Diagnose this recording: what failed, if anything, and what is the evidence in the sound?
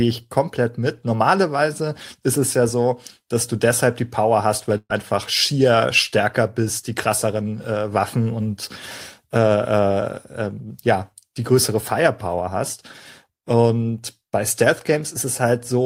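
A burst of packet loss at 4.77–4.92 s, after "hast weil": the network dropped about 120 ms, the receiver concealed it by continuing the last sound and fading it out, then resumed at "schier stärker bist die".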